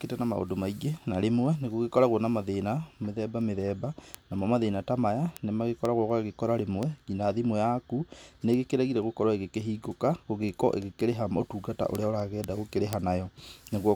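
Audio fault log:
0.24 to 13.91 s, word clock ticks: a steady string of sharp ticks, about five a second and around fifty in all, running under the speech. The receiver isn't locked to the sender's clock, so each time they slide past each other a single sample gets dropped or repeated. That fits a clock mismatch of roughly 100 ppm.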